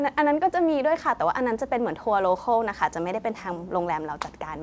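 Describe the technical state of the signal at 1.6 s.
At 1.6 s the speech is intact, with no dropout, glitch or distortion, only the ordinary band-limited sound of the call path with nothing above 8 kHz.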